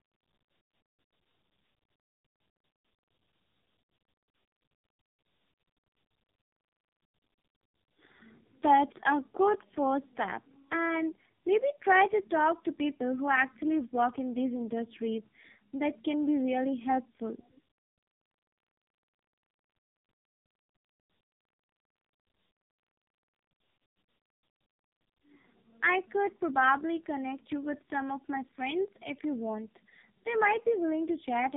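Tandem speech coding runs throughout: AMR-NB at 12.2 kbit/s, then G.711, then AMR-NB at 5.9 kbit/s, each coder degrading the last, leaving rough, warbly speech with nothing above 3.7 kHz.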